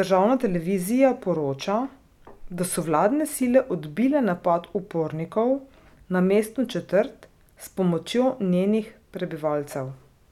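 Listening through this speech recording, nothing stood out as a technical problem.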